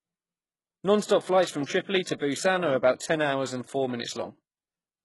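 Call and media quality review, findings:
Treble sounds synthetic and gritty across the whole speech clip, s sounds lispy and metallic, nothing above 11.5 kHz, heavy damage. Likely HE-AAC compression: upper band rebuilt by copying lower bands up, so harmonics don't line up. Fits a bitrate around 12 kbps.

Pre-echo, 2.03–2.06 s (33 ms) and 2.95–3.01 s (52 ms, just before "ten hours and four"). Short hiss ahead of sharp attacks, onsets smeared. The transform codec spread block noise sized for the loud attack into the quiet lead-in.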